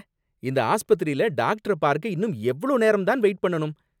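Nothing here sounds amiss at any point in the speech, so there's no technical fault to point to.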